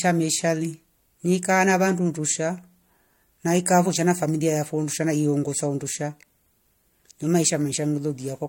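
No technical faults are audible anywhere in the speech.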